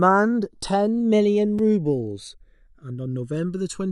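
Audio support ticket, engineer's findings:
Channels drifting apart, whole clip: slow flanging when summed to mono. Probable cause: L/R captured on two devices with unsynchronised clocks, mismatch on the order of 150 ppm, inter-channel delay creeping up to under a millisecond by the end. Spectrogram of the mono sum shows comb notches sliding gradually across the spectrum.

Block of digital silence at 1.59 s: a tick in the speech. Probable cause: output buffer not filled in time, about 5 ms zeroed. Waveform shows a flat near-silent segment with hard edges and no fade. Spectrogram shows a thin full-band gap.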